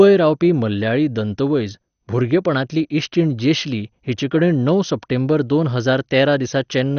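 MP2 compression damage runs through the whole speech clip, from start to finish, and is plainly audible. Nothing is present above 6.5 kHz, so the sound is dull and lacks air. What remains has a gurgling, granular texture, likely from MPEG Layer II coding at a low rate, which fits roughly 48 kbps. With so few bits, the coder shuts off entire upper sub-bands and flickers others on and off, quantising the survivors coarsely.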